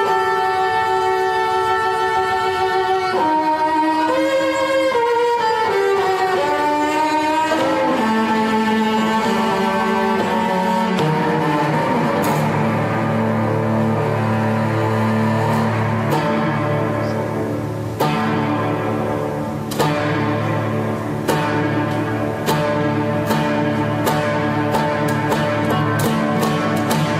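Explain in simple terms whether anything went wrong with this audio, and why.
Nothing went wrong with this audio that a careful listener can pick out. At no point does the sound change in a way that points to a technical problem, so there is nothing here to explain or fix.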